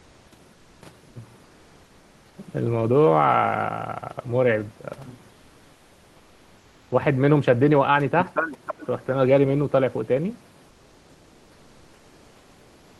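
From the start to 0.31 s, then 0.53–0.81 s, 1.43–2.37 s and 5.33–6.91 s, the pauses carry comfort noise in place of the background: a flat, featureless hiss about 1 to 3 dB quieter, likely from Opus DTX. At 8.51–8.87 s there's an echo leak, a delayed copy of the speech arriving 320 ms late and roughly ten decibels down, likely from a loudspeaker echo canceller that let some of it through. From 10.69 s to the end the comfort noise returns, about 2 dB down.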